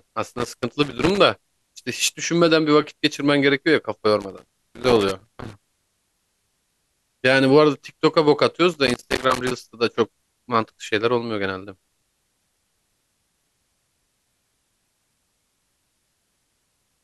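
Loose connector crackle breaks into the speech four times: 0.33 to 1.18 s, 4.20 to 6.00 s, 8.73 to 9.51 s, and 15.99 to 16.26 s. A worn contact is making and breaking. The signal chops out, with irregular scratchy crackle.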